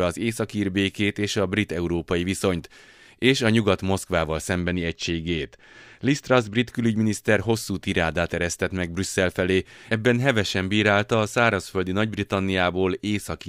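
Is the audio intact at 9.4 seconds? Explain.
Yes, the speech at 9.4 seconds plays through intact, with no audible fault at that moment.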